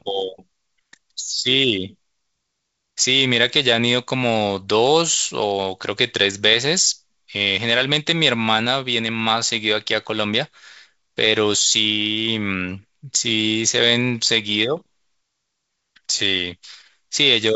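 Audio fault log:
No faults heard; the speech comes through a G.722 wideband telephone path whose bandwidth, with nothing above 7.7 kHz, fits its 64 kbit/s mode.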